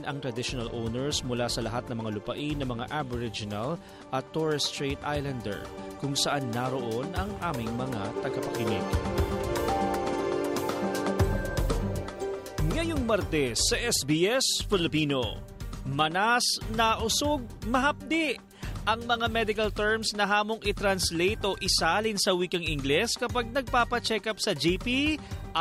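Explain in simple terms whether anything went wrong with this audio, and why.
Nothing went wrong; I hear no faults at all.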